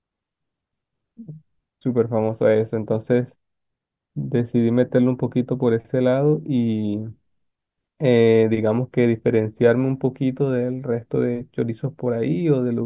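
Nothing in this speech recording stood out as a technical fault on listening.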